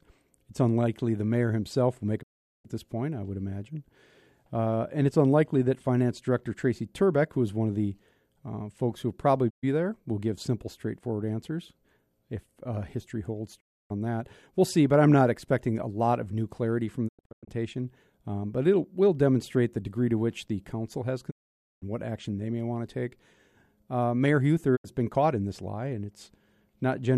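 Digital broadcast dropouts mute the speech at 2.21–2.66, 9.49–9.65, 13.59–13.92, 17.07–17.49, 21.29–21.84 and 24.75–24.86 s. Corrupt frames were discarded, so each gap fades to silence and loses its content. At 17.1 s it breaks into several short holes.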